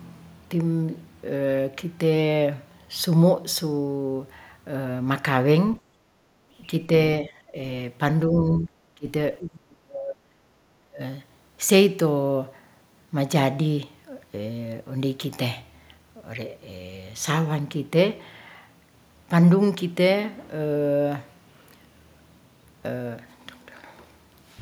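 From 5.81 to 6.55 s the background is gated by the echo canceller. While the far end plays, it pulls the microphone down by about 12 dB, so the room tone dips and then returns. On a spectrogram the noise floor thins into a pale band. The waveform's low-level hash narrows there.

Between 7.21 and 11.0 s the speech itself is cut back, at 7.21–7.55, 8.28–8.76, 8.95–9.07, 9.39–10.31 and 10.76–11.0 s. The likely cause is speech suppressed in double talk, with the canceller attenuating the near talker while the other side speaks. The dips range from around 10 dB to roughly 30 dB and deepen over the run. They appear as drops in level in the spectrogram, and as sudden envelope notches in the waveform.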